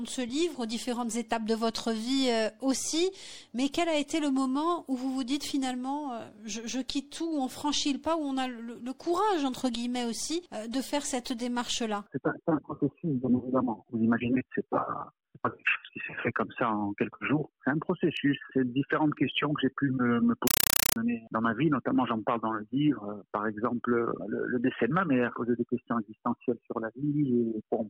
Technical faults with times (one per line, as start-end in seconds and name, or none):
20.47-20.96 compressed stream played as audio